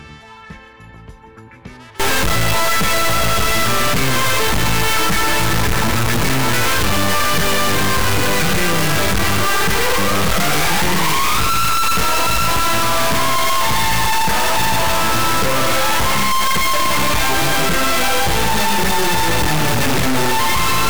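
Integer read as float from 2.00 s to the end: the samples sound like 32-bit integers decoded as 32-bit floats, snapping between silence and clipping in a harsh, extremely loud square-wave buzz.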